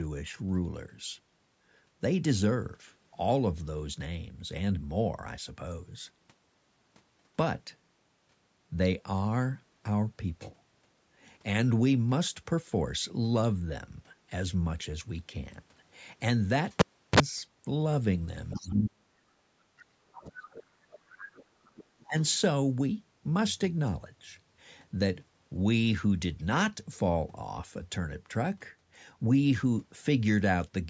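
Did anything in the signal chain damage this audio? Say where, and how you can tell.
Yes. The damage happened at the call-processing stage, most likely in the echo canceller on the talker's device. It failed to fully remove the far end's loudspeaker sound from the microphone, so the other side's voice leaks through. It appears as faint scraps at 18.5–18.71 s, 19.77–19.83 s, 20.16–20.43 s, 20.92–21.45 s and 21.65–22.37 s, roughly 20 to 30 dB below the main speech.

The same canceller also shows speech suppressed in double talk. When both sides spoke at once, it likely could not tell the local talker from the echo and turned everything down. The talker's voice drops out from 18.57 to 19.49 s and from 19.76 to 20.76 s, with the deepest dips around 40 dB. A shorter, shallower dip of about 20 dB follows at 22.07–22.16 s. These gaps coincide with the leaked far-end voice, the signature of a suppressor clamping down during overlap. 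The band-limiting to nothing above 8 kHz comes from the call microphone path itself.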